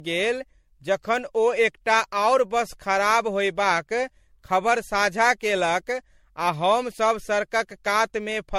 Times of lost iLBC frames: none

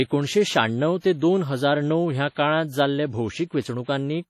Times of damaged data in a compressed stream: none

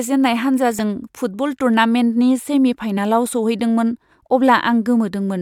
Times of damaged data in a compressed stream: 0.79, 2.96

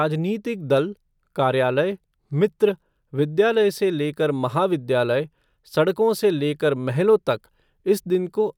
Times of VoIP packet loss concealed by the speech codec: none

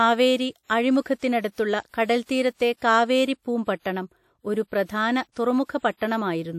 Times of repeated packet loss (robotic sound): none

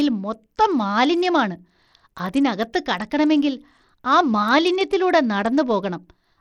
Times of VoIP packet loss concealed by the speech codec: none

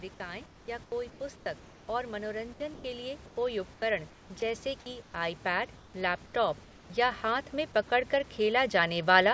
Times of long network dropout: none

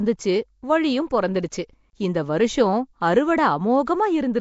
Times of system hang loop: none

